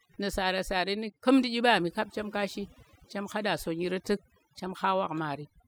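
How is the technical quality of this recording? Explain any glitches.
The recording has one clear problem. Overdone noise removal runs throughout the speech: an over-aggressive reducer mutes frequency bands near its noise estimate, leaving twinkling specks in near-silence and taking quiet parts of the voice with them.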